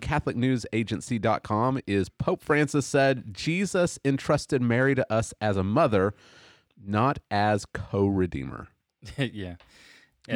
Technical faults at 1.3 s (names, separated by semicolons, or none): none